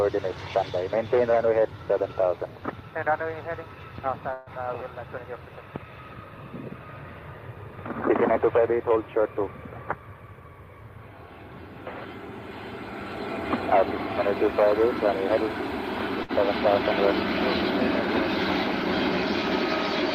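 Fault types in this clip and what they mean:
call audio freeze: From 4.33 to 4.49 s the sound stops moving forward and the last moment carries on as a fading buzz for about 130 ms. Then it resumes exactly where it left off. Nothing seems to be skipped. Instead a gap has been inserted, and everything after it arrives 130 ms later. The likely cause is packets held up in transit, leaving the receiver's jitter buffer with nothing to play.
jitter buffer speed-up: Between 9.96 and 10.67 s the sound runs at about 115% of normal speed, yet its pitch stays the same. It comes across as hurried. The receiver had built up more buffered audio than it wanted. To shed the excess delay, it cut out many tiny slices, each one or a few pitch periods long. Together they come to roughly a tenth of a second.
short stall from a late packet: At 16.23 s one packet arrived late and the jitter buffer briefly ran dry. 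To cover the gap, the receiver stretched the last sound for 57 ms until the packet turned up. Playback then continued from the same point, with nothing lost. The result is a moment held slightly too long, with a faint buzz or dip. Everything afterwards is shifted 57 ms later.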